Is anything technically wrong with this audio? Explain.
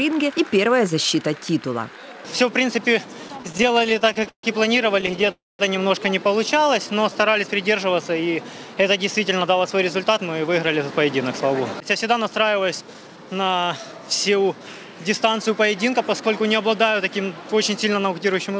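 Yes. The audio shows several jitter-buffer faults in sequence, all consistent with a call path whose band stops at 8 kHz, which fits a 64 kbps G.722 stream.

Repeated stalls (stutter) occur from 3.28 to 4.45 s and again from 5.01 to 5.30 s. Packets arrived late, so the buffer kept running dry and the receiver stretched the last sound to cover about 21 and then 6 short gaps. The first burst is worse, with 334 ms filled and the longest gap 141 ms. The sound drags and hiccups, with nothing lost.

A call audio freeze follows from 5.32 to 5.61 s. Its likely cause is packets held up in transit, emptying the buffer. The last sound is carried on briefly and then drops to about 210 ms of silence, inserting a 275 ms pause before the audio resumes where it stopped.

A jitter buffer slow-down runs from 6.54 to 7.32 s. To rebuild its reserve, the receiver repeated single pitch periods, adding 81 ms. 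The audio plays at about 90% speed with unchanged pitch, so sounds are drawn out.

Jitter buffer speed-up appears from 9.21 to 10.92 s at 107% and from 11.33 to 13.93 s at 108%. With excess audio queued, the receiver trimmed short pitch-period chunks, removing roughly 100 ms and 200 ms respectively. The result is hurried pacing at the same pitch.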